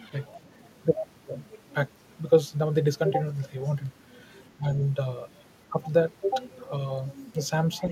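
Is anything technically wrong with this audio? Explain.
Yes. Between 4.55 and 4.78 s there is speech suppressed in double talk. The echo canceller was likely faced with both ends speaking at once, could not tell the near talker apart from the loudspeaker echo, and pulled its gain down on everything. The result is a brief sag in the speech, around 150 ms in total, dropping by roughly 10 dB at its deepest, so the voice partly ducks out before recovering.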